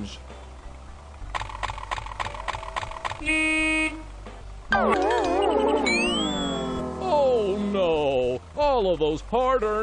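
The audio has damaged data in a compressed stream. Three brief blips occur, at 0.87, 4.40 and 6.79 s. Each is a short glitch. Corrupted bytes made the decoder misread those frames, lose sync and hunt for the next valid frame header.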